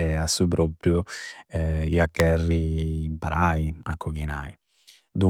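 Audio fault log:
2.20 s, electrical switching spike: a single sharp snap sits on top of the speech, far too brief to belong to it, and peaking fairly loud at around -10 dBFS. It is likely a nearby switch or static discharge arcing and being picked up by the audio line. On the waveform it shows as one thin vertical spike; on a spectrogram, a narrow vertical stripe running across nearly all frequencies.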